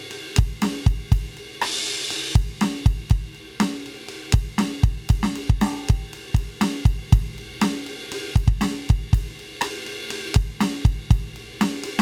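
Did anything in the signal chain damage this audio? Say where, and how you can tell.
No, nothing in the signal chain has damaged this music. Nothing in any stage, from capture to playback, leaves a mark on the audio.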